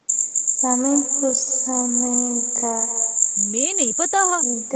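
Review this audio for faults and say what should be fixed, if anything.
Echo with no canceller, throughout: every phrase returns about 20 dB quieter and roughly a fifth of a second later, thin, from the far loudspeaker feeding its microphone. Enabling acoustic echo cancellation on the far end, or having that caller wear headphones, would prevent it.

Time-stretched section, from 1.01 s to the end: the pace abruptly drops to 0.51 times normal speed at unchanged pitch, likely from software stretching audio by repeating short pieces. Keeping the original timing, or re-recording rather than stretching to fit a length, would prevent it.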